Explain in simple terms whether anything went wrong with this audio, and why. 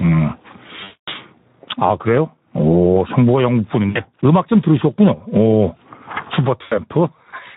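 Three separate problems can be heard in this speech recording.

Gain pumping runs through the whole clip. The level drops each time the voice gets loud and comes back up afterward, so it keeps breathing up and down by a wide margin. The likely cause is a microphone level set far too high, with an automatic limiter constantly pulling it back down.

The Speex codec, an older speech compressor used in internet calls and game chat, is set to low quality here, and its damage is plainly audible throughout. It has too little detail to rebuild the voice faithfully, so speech comes out hoarse and noisy.

VoIP packet loss concealed by the speech codec happens three times: at 0.83 to 1.09 s, 3.89 to 4.03 s and 6.63 to 6.80 s. Pieces of the call never arrived, so the decoder stretched the last bit of voice into a fading buzz or noise, and the speech stays weak briefly afterward.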